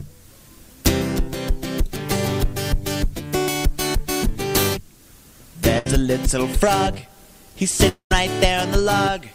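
At 5.78 s there's a burst of packet loss lasting about 80 ms: the receiver stretches the last bit of sound into a short fading buzz or hiss for roughly 70 ms, then picks up further along with that slice simply gone.

From 7.89 to 8.12 s the sound cuts out for about 220 ms. It's concealed as a decaying tail, then goes to silence for around 110 ms before resuming past the lost stretch. That's likely a long network dropout rather than a brief burst.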